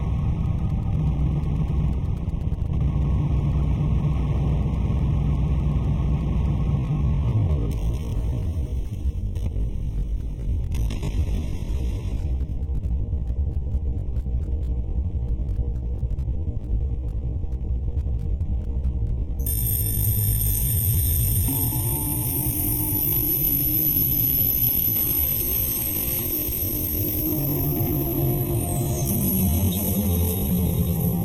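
From 6.75 s to the end, the pace abruptly drops to about half speed, 0.55 times the original rate, while the pitch holds exactly where it was. The slowed stretch drags. This is likely a time-stretched section: software lengthened the audio to fill a target duration and preserved pitch by repeating short slices of the signal.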